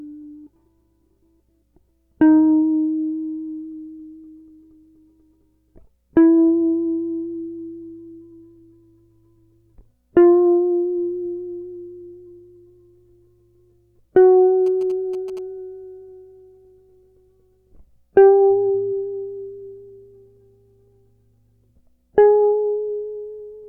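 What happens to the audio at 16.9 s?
At 16.9 s the music plays through cleanly, with no dropout, click, distortion or other fault at that moment.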